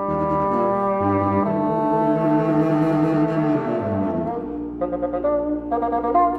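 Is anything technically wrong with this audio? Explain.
No, nothing stood out as technically wrong on listening.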